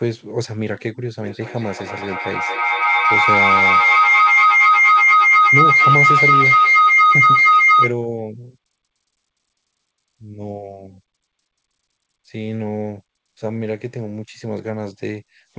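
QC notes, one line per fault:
1.18 to 8.0 s, feedback howl: a tone of around 1.5 kHz climbs out of the audio and peaks at about 10 dB over the speech, with the loop repeating roughly every 200 ms. That's two devices in the same room on the call, each picking up the other's loudspeaker, with the loop adding gain on every pass, so the repeats grow and narrow onto the pitch the loop favours until it's cut off at 8.0 s. The band tops out at 8 kHz throughout, which points to a G.722 call path.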